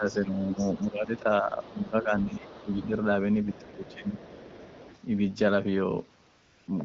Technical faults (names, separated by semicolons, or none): speech suppressed in double talk; other side's voice leaking through; AMR comfort noise